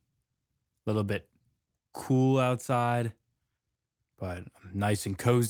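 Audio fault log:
Nothing wrong turns up anywhere in this bit of speech, so there's nothing to log.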